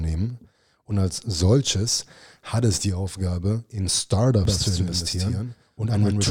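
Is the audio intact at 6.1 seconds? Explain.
No. A doubled audio track runs from 4.45 s to the end of the clip, so 6.1 s falls inside it. The speech is likely being captured a second time through a slower path, which mixes in a full-band copy trailing the original by roughly 150 ms and sitting around 5 dB quieter. The copy starts abruptly at 4.45 s and adds no decay or room colour, so the speech sounds like a flat, stuttering echo.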